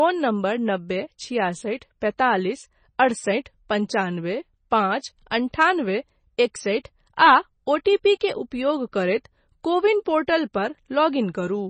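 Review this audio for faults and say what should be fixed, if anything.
Heavy MP3 compression, likely at a very low bitrate around 24 kbps, starves the encoder of bits across the whole speech clip. It cuts everything above 9 kHz and drops weak frequency lines from frame to frame, leaving a dull, watery, swirling sound with metallic chirps on s sounds and smeared attacks. Encoding at a higher bitrate or delivering a lossless file would prevent this.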